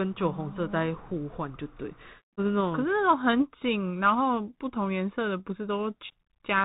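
Speech, heard through the Bluetooth CVSD headset codec for the whole clip. Nothing above 4 kHz survives. A one-bit delta coder's adaptive step lags loud high sounds, so s sounds turn scratchy and granular hiss sits underneath. The damage is plainly audible, which fits a 64 kbps CVSD link.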